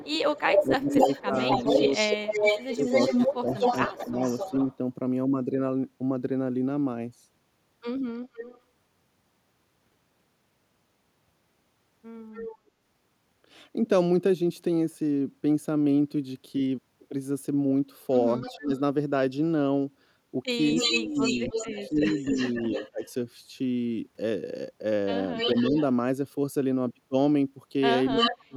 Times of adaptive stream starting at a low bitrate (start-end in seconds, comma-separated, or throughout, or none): none